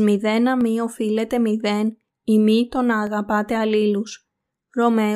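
At 0.61, 3.07 and 4.13 s the speech has single sharp clicks, each likely from dropped samples: a fraction of a millisecond goes missing, so the waveform jumps. Unlike a dropout, no sound audibly vanishes. There is only the instantaneous click.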